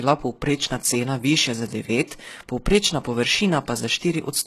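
Throughout, the s sounds come out gritty and lispy, the upper treble has a synthetic, metallic sheen, and nothing is present above 12.3 kHz. This is likely HE-AAC compression, with treble rebuilt from copied lower bands, at a rate suggesting roughly 16 kbps.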